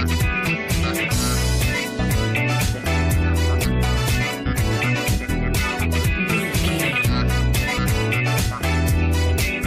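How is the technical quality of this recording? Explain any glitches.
The recording is marred by damaged data in a compressed stream: brief blips at 1.10–1.12 s, 3.63 s, 5.28 s and 7.77 s, where corrupted frames make the decoder lose sync and search for the next frame header.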